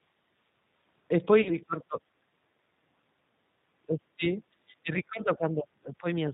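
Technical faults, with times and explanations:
Throughout: G.729 codec. The speech has been squeezed to 8 kbit/s and rebuilt from a vocal tract filter, pitch predictor and sparse pulses, so nothing above 4 kHz survives and the voice sounds plainly rough, thin and slightly synthetic.
1.42–1.57 s: VoIP packet loss concealed by the speech codec. About 40 ms of audio went missing, which fits two lost packets. The decoder stretched its last pitch and filter into a fading buzzy tone or coloured noise, and the sound stays weak briefly after packets resume.
1.67–1.98 s: speech suppressed in double talk. The voice dips by as much as about 15 dB over roughly 150 ms. The likely cause is an echo canceller turning the signal down while it could not tell the talker apart from far-end echo.
3.87–6.05 s: speech suppressed in double talk. The drops are deeper here, reaching about 25 dB, for around 1.5 s in total. 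This is likely the echo canceller turning down both the talker and the echo while the other side was also talking.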